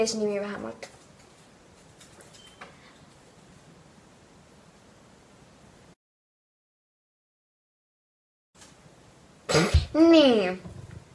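Nothing here sounds wrong technically; the audio just runs along without anything catching the ear.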